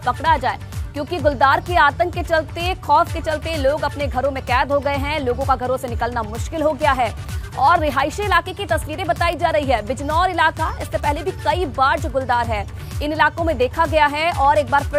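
A flipped bit corrupts the data at 2.66 s and 9.33 s, producing bit error spikes: brief, broadband ticks peaking near about -13 dBFS and about -7 dBFS.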